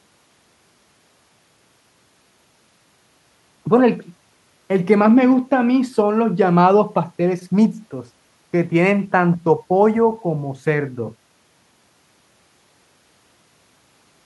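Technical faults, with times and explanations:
Nothing in the recording stood out as a technical problem on listening.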